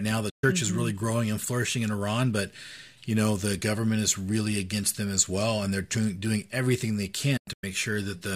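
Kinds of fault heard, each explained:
Digital broadcast dropout: speech snaps to silence near the start, then breaks into scattered holes near the end, as the receiver muted over failed frames.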